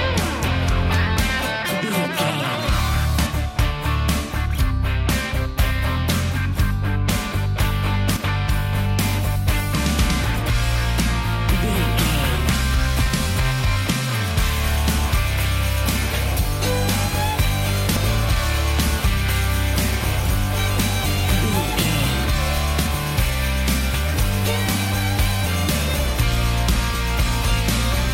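Audio is missing between chunks, most likely because the recorder or processor lost a short stretch each time it closed one block of roughly five seconds and opened the next. The sound skips forward at 13.07 s and again at 17.97 s. Each time, about a tenth of a second is missing and the two sides are butted together with no silence between them, so the jumps are abrupt.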